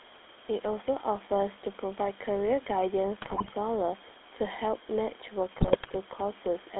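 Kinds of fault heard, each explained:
GSM full-rate codec: The whole speech clip passes through the first GSM speech coder. It rebuilds the voice from a vocal-tract model driven by a coarse, regularly spaced pulse train, which gives a steady buzzy, gravelly grain. The band runs from about 250 Hz to 3.6 kHz, which fits the 13 kbps full-rate channel. Simple band-limiting would only dull the highs, but here the roughness sits inside the voice itself, all the way through.
GSM bit errors: Flipped bits reach the decoder, so the filter, pitch or gain values for a frame come out wrong. The spectrum twists or the level jumps, and the voice briefly breaks into squawks, pops and gargling, from 3.22 to 3.55 s and again from 5.58 to 5.91 s. The damage points to roughly 3% of bits corrupted. Packet loss leaves gaps or smoothed-over repeats, but this produces loud, garbled sound where the speech should be.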